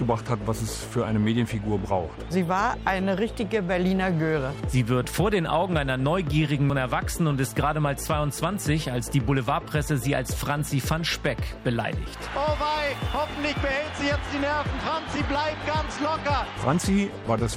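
At 6.70 s there is damaged data in the compressed stream: a stretch of corrupted bytes that the decoder misreads, losing frame sync until it locks onto the next valid header. The result is a brief chirp, squawk, click or short hole that cuts across the audio.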